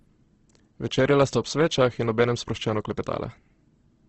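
From start to finish the speech sounds grainy and rough, with a noisy, sandpapery texture where the harmonics should be clean, and nothing comes through above about 8.2 kHz. That's likely Opus compression running its music-style CELT mode in wideband at a starved rate, which fits something around 16 kbps. Short on bits, it patches thin bands with folded or noise content rather than leaving gaps, so you get grit instead of swirl.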